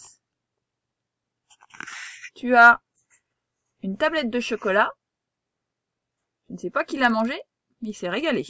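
From 6.75 s to the end, the resampler restarted on every block. Each 50 ms block was converted from 48 kHz to 16 kHz in isolation, so every block edge carries a small error, heard as a steady 20 Hz tick-buzz riding on the signal.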